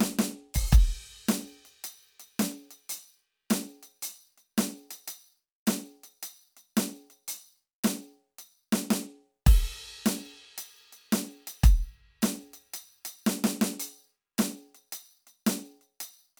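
No technical faults can be heard anywhere in this music. There is nothing here to point out at any moment of the clip.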